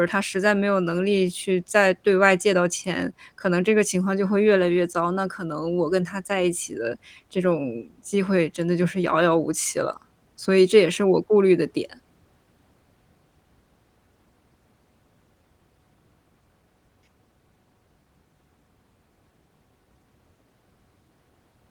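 Nothing stood out as a technical fault on listening to this speech.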